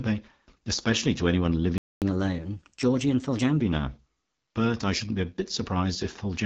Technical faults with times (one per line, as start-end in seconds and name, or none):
0.00-6.46 AMR wideband (HD Voice) codec
1.78-2.02 playback stall
2.02-3.61 catch-up at higher speed